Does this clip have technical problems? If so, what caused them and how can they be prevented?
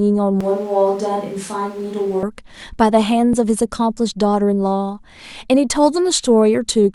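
Yes. From 0.41 to 2.23 s, the close microphone's feed likely dropped out and the recording fell back to a more distant pickup, the classic switch to a distant microphone. The speech turns suddenly roomy and hollow, loses bass, sits about 5 dB lower, and carries background noise only about 25 dB beneath it, before snapping back to the close sound. Monitoring the close microphone's signal during recording and checking its connection and battery would prevent this.

At 3.33 s, two consecutive stream segments carried overlapping time stamps, an overlap between stream segments, so the player discarded a few milliseconds of audio that had never actually been duplicated. The waveform jumps across the gap, heard as a brief click or tiny skip in the speech. The timing fits segment boundaries spaced 4 seconds apart. Having the packager derive each segment's time stamps from exact sample counts, so boundaries meet without overlap, would prevent it.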